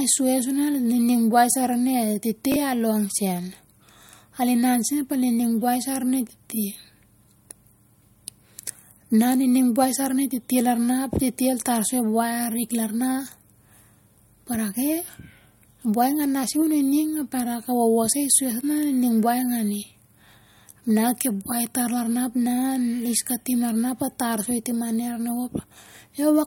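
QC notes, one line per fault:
1.50–1.54 s and 2.52–2.56 s, chunks out of order: in each spot a 20 ms chunk plays one chunk late, swapped with its neighbour. The first comes between "nining buai" and "sai arin". Nothing is missing, but the brief reversal smears the syllable into a jumbled flicker. Three hard joins per swap show on the waveform as abrupt discontinuities 20 ms apart, and on the spectrogram as thin vertical broadband lines with a misaligned harmonic pattern between them.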